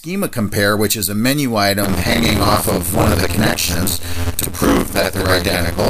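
From 1.82 s to the end at 5.90 s, buffer tearing sets in. The writer and reader of the playback ring buffer have drifted so their positions cross within every period. Something under half of each buffer replays audio from around 50 ms earlier, spliced in with hard joins. The result is a steady robotic rattle at 86.1 Hz, which fits a 512-sample buffer. On a waveform, discontinuities repeat every 11.6 ms. A spectrogram shows vertical striations at that spacing.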